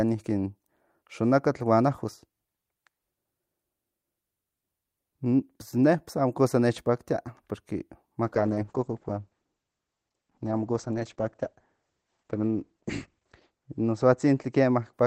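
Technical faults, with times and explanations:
8.24–15.07 s, call bitrate drop: the speech turns rough and watery and loses its brightness, with the top end stopping near 8 kHz instead of 20 kHz and staying at its worst for about 5.1 s. The encoder was forced from roughly 48 kbps to something like 9 kbps, so it codes much more coarsely and discards high frequencies.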